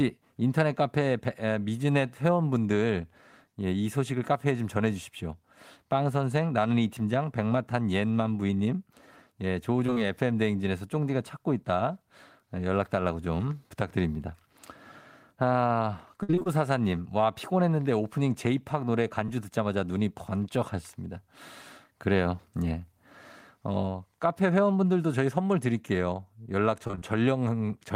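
Short concealed packet loss at 8.47 s, from 9.86 to 9.99 s, and at 19.26 s: about 20 ms went missing and was patched by extending the prior sound, heard as brief smears, with smoothed harmonics and no waveform break.

Repeated packet loss (robotic sound) from 16.23 to 16.48 s and from 26.87 to 27.04 s: frequent gaps, concealed for over half of each span, give choppy audio, with blurred, striped spectrogram patches.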